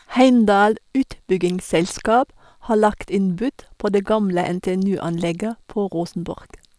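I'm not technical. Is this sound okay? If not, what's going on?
Yes, it's fine: nothing in this recording stands out as a technical problem, so there's nothing here you need to worry about.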